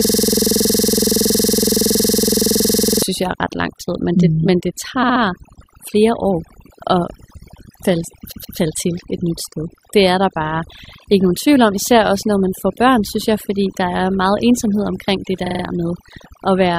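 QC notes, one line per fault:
throughout: overdone noise removal. Noise reduction set too strong gates bands near the noise floor, leaving a lowered background with twinkling specks.
0.00–3.03 s: system hang loop, already under way at the start. A frozen system recycles a 46 ms buffer, which fits 2048 samples, giving a steady 21.5 Hz buzz until "synes jeg er ret".
5.02–5.21 s, 8.31–8.56 s, 15.45–15.62 s: repeated frames. Resent compressed blocks replay as stutters: 64 ms three extra times, 128 ms twice before "til et nyt sted", 43 ms four times after "meget ensomhed omkring det".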